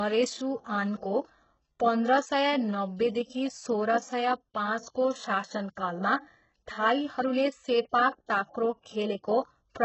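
Throughout, the speech sounds gritty, metallic and lispy, with nothing above 8 kHz. This is likely heavy HE-AAC compression, which rebuilds the treble from copied lower bands.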